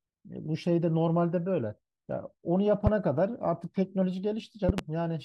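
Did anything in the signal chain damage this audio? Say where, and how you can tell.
Yes. Loud pops at 2.87–2.90 s and a double at 4.69–4.81 s, about 15 dB over the speech. Likely analogue voltage spikes from a plug.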